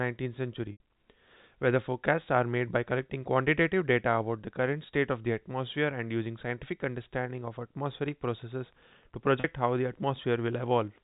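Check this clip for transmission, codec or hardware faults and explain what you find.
Two kinds of fault are present, heard through the narrow telephone band of G.711 coding.

Packet loss with pitch repetition at 0.72–0.80 s (80 ms) and 9.40–9.44 s (40 ms), which fits 20 ms packets. The receiver repeats the last pitch period, so these moments sound briefly held and buzzy. On the waveform, identical cycles repeat and fade. On a spectrogram, flat harmonics stretch across each gap.

Wi-Fi interference from 8.05 s to the end. A nearby radio's beacon every 102.4 ms is rectified by the circuit into faint, steady ticking about ten times a second, well below the speech. It shows as evenly spaced thin vertical stripes on the spectrogram.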